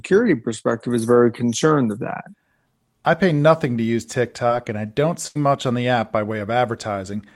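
At 4.47 to 4.51 s, between "pay nothing to use" and "and I don't", there is a short concealed packet loss. About 20 ms of the speech never arrived at the decoder in time, and the receiver patched roughly 17 ms of it by extending the preceding sound before cross-fading back into the real signal. The result is a brief smear or wobble in the voice rather than a clean cut.

From 5.27 to 5.37 s, after "and I don't" and before "much on the app", a burst of packet loss removes about 80 ms of speech. The receiver fills the same 80 ms by continuing the last sound and attenuating it as the gap runs on, so the audio holds and fades. Playback then picks up further along, with the lost stretch of speech skipped entirely.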